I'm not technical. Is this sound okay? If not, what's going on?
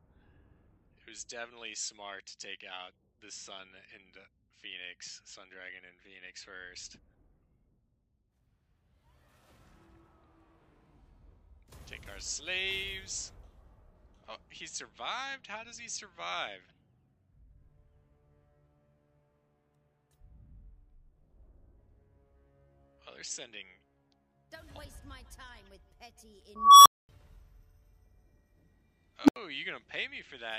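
No. There are two bursts of an unstable filter. At 26.56 s a high beep, roughly 1 kHz, swells to full loudness over about 0.3 s, then the sound drops out for about 0.23 s. At 29.24 s a lower hum, roughly 300 Hz, blows up in about 0.05 s, followed by a gap of about 0.08 s. A processing filter is feeding its own output back and amplifying it until it overloads and shuts off.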